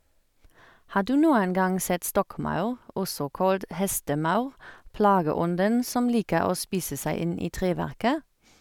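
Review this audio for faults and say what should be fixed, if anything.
Nothing to fix: no faults are audible anywhere in the speech.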